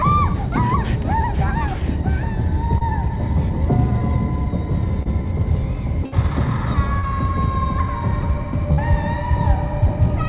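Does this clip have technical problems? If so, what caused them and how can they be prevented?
Yes. There are four short concealed packet losses, at 2.78, 5.03, 6.99 and 8.74 s. Each is a brief smear or wobble lasting a few hundredths of a second. About 30 ms of audio never arrived in time, so the receiver filled each hole by extending the preceding sound for 26 to 38 ms before blending back into the real signal. Anything very short in those moments can vanish. Preventing this means reducing network jitter and loss, for example by using a wired connection, prioritising call traffic, or enabling forward error correction.

There is also one burst of packet loss, from 6.06 to 6.15 s. It is a longer held buzz or fading hiss where the last sound is stretched and gradually turned down. About 60 ms went missing in a row and was replaced by 60 ms of concealment. The audio then picks up further on, and the part in between is gone. 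Preventing this means fixing the congested or unstable link and allowing a slightly deeper jitter buffer so late packets can still be played.

The call path itself carries nothing above 4 kHz, which fits a narrowband G.711 A-law connection at 64 kbps.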